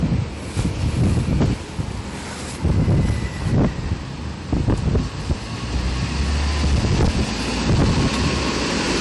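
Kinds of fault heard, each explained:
Hard clipping: throughout, the sound is driven about 20 dB past full scale, so roughly a tenth of samples are cut flat, giving harsh fuzz on every loud moment.
Transcoding between lossy codecs: throughout, nothing above 11.3 kHz survives, and the artefacts of each codec are heard together, likely from a low-rate MP3 re-encoded to AAC-LC.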